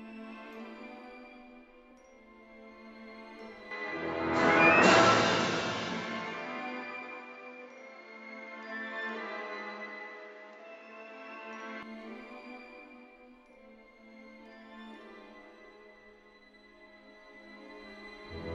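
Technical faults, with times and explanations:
3.71 to 11.83 s, input switched to a poorer device: The sound abruptly dulls, losing everything above 7.6 kHz. The level shifts by around 5 dB, and a new noise floor appears roughly 35 dB down. There is no gap. The likely cause is a narrower-band microphone, before switching back.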